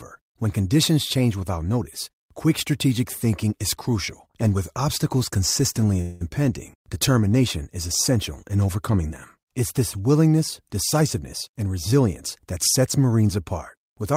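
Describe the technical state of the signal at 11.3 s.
At 11.3 s the speech is inside a jitter buffer speed-up running from 11.01 to 11.93 s. The receiver's buffer had built up more audio than its target, so it trimmed short pitch-period-sized slices out of the signal repeatedly, removing about 50 ms in total. Playback runs at 105% of normal rate while pitch stays unchanged, so this stretch sounds hurried and compressed in timing rather than higher in tone.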